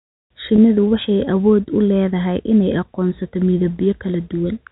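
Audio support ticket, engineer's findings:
Packet loss with pitch repetition, 0.56–0.58 s, just before "waxay awood u leedahay": brief held, buzzy tone where the decoder's concealment repeated the last pitch period across a 20 ms gap.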